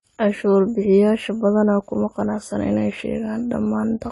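AAC compression runs throughout the speech clip, from start to end. Nothing is heard above 11.5 kHz, and the coding damage is plainly audible across the whole recording. The likely cause is low-bitrate AAC-LC encoding, consistent with something around 32 kbps. At that rate the encoder, quantising each frame's spectrum against a hearing model, lowers the bandwidth and spends too few bits on the remaining bands. That leaves the upper range missing and the coded detail compromised.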